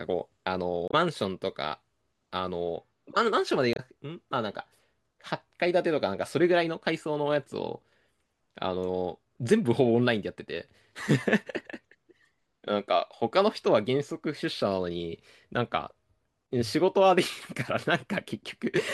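Damaged data in the compressed stream throws the decoder out of sync twice, at 0.88 to 0.94 s and 3.73 to 3.80 s. Each time it misreads corrupted frames and hunts for the next valid header, leaving a brief glitch of roughly 60 ms in the speech.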